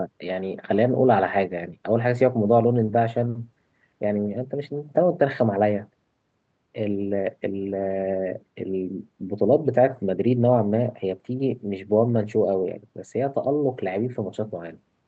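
No technical faults can be heard in the speech. It has gone through a WebRTC call path, and its content stops at about 8 kHz, which fits an Opus codec running at around 32 kbps.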